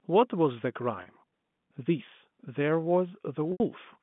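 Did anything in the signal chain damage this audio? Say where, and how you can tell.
Yes. Packet loss with pitch repetition, at the network stage, appears at 1.02 s and 3.52 s. The first gap, about 40 ms, sounds like a slightly held, buzzy note: the receiver loops the last pitch period to cover it, which fits two 20 ms packets lost. The second, about 80 ms, outlasts the roughly 50 ms fade on the repeated period, so the sound drops into silence before returning through a short cross-fade at 3.60 s, which points to four lost packets.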